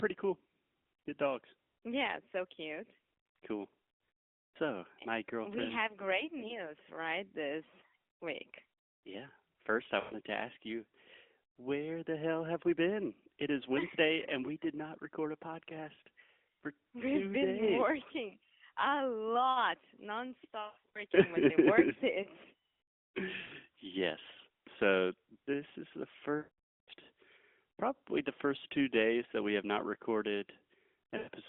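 Lost AMR speech frames break the speech at 4.19–4.57 s (just before "eh my"), 10.0–10.14 s (before "to ask you"), 20.62–21.03 s, 23.42–23.53 s, 26.38–26.90 s (after "this is the") and 31.18–31.29 s. Each time, corrupted frames made the decoder repeat the last pitch and vocal tract settings at falling gain. The sound stretches and warbles, and in the longer runs fades to silence. Around 20.62 s it stutters in short broken patches. On a spectrogram the harmonics freeze as flat horizontal lines and then dim into blank gaps, and the waveform tapers to near-flat stretches before the speech resumes.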